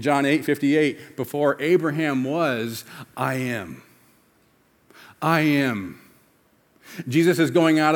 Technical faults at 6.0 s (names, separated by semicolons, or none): none